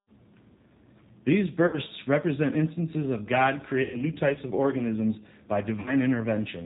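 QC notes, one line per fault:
Throughout: G.729 codec. The sound is plainly rough and slightly synthetic, with nothing above 4 kHz. This fits an 8 kbit/s G.729A stream, which rebuilds speech from a vocal tract filter, pitch predictor and a few pulses per 10 ms frame.
1.67–1.77 s, 3.82–4.05 s, 5.80–5.97 s: VoIP packet loss concealed by the speech codec. Buzzy or noisy, fading stretches sit just before "represent instances of", just before "types of organisms by", and just after "types of organisms by". About 60, 120 and 60 ms of audio went missing, and the decoder extrapolated its last pitch and filter at falling gain. Recovery lags because each frame builds on the last.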